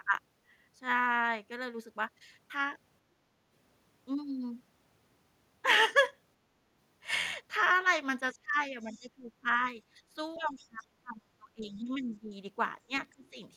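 From 8.33 to 9.48 s the speech dips by roughly 25 dB, likely speech suppressed in double talk, with the canceller ducking the talker along with the far-end echo. Between 9.86 and 10.09 s the background is gated by the echo canceller, with the room sound dropping about 11 dB for a moment before it lets go. At 10.34 to 10.39 s and again 10.64 to 10.85 s, faint scraps of the other side's voice leak through, sitting around 30 to 35 dB under the talker, likely echo the canceller didn't fully remove. The same double-talk suppression then turns the speech down again from 10.37 to 12.35 s, briefly at 12.86 to 12.92 s, and from 13.11 to 13.36 s.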